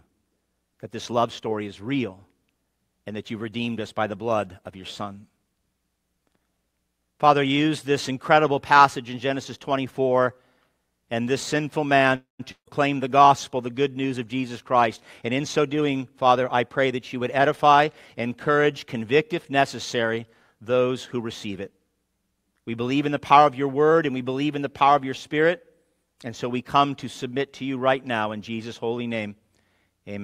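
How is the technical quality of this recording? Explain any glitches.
The recording has three network-related glitches, two close together just after 12 seconds and a third a couple of seconds later.

From 12.15 to 12.41 s there is a call audio freeze, likely from packets held up in transit until the jitter buffer ran dry. The receiver stretched the last sound into a fading buzz that ends in about 140 ms of silence. The audio then resumes where it stopped, with nothing lost, only a 239 ms gap inserted.

From 12.51 to 12.69 s a long network dropout follows, likely with no audio delivered for that stretch. Again the last sound trails off into a decaying hiss and then about 100 ms of silence. When the sound returns, roughly 160 ms of the original has been skipped.

From 14.75 to 17.87 s the jitter buffer speed-up appears. The receiver was holding more audio than its target, so it repeatedly cut out tiny pitch-period slices to drain the backlog, removing about a fifth of a second. 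The audio runs at 107% speed with unchanged pitch and sounds hurried.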